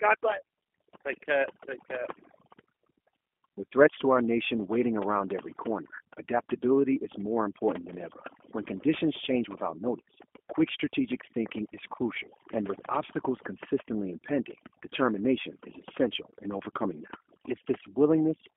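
Across the whole recording the background is pushed to near silence, with small twinkling specks left where noise used to be. The quietest parts of the voice fade in and out with it. This is overdone noise removal: a noise reduction tool set too aggressively cut individual frequency bands far down or off whenever they came close to its noise estimate, and the low-level parts of the speech were taken away along with the noise.

Also present throughout, the voice has a slightly rough, synthetic, buzzy character, and the sound is boxed into a narrow telephone band of roughly 250 Hz to 3.4 kHz, with no low body and no air on top. The codec damage is plainly audible, and the sound fits the G.729 codec at 8 kbit/s. It rebuilds speech from a compact model of the vocal tract and pitch rather than from the original waveform, which gives it that coarse, artificial edge.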